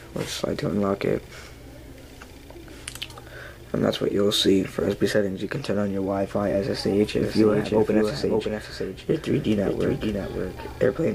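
From 7.23 s to the end, a doubled audio track appears: a second full-band copy trails about half a second behind, roughly 5 dB quieter, likely from a slower capture path. Unlike an echo, it starts abruptly, with no decay or room colour.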